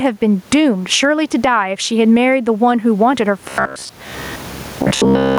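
Speech, with the input gain likely set far too high so a fast limiter clamps down on each loud sound, causing gain pumping: a swing of about 25 dB and a squashed sound. From 3.40 to 5.38 s, robotic sound from repeated short buffers appears, likely because new audio arrives too seldom and most of it is skipped. A rigid, metallic 66.8 Hz buzz results, which fits a repeated buffer of about 15 ms. The room noise sits about 40 dB below the speech.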